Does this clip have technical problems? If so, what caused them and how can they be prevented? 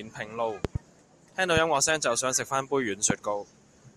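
Yes. A likely voltage spike from a plug, switch or static discharge adds loud pops far above the speech: a double pop at 0.65–0.78 s and a single pop at 3.10–3.13 s. To prevent it, secure connections, avoid switching gear or touching cables while recording, and ground equipment properly.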